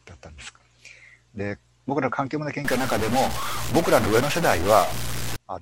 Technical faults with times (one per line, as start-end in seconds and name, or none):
2.65-5.36 stuck bit